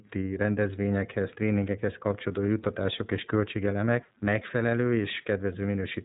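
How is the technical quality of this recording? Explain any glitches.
The recording is compromised by plainly audible codec coloration for its whole length, and a buzz joins in partway through.

iLBC codec, throughout: each 30 ms frame is coded independently at narrowband, so nothing above about 3.8 kHz survives. The speech sounds muffled, slightly rough and synthetic, which fits iLBC's 13.33 kbps mode. The damage is plainly audible.

Mains buzz, from 2.04 s to the end, starting right after "rendezvényekhez tréningekhez": switching spikes at twice the 50 Hz mains rate leak in, with harmonics stretching up into the kilohertz range. They produce a steady, raspy buzz sitting low, roughly 40 dB under the speech.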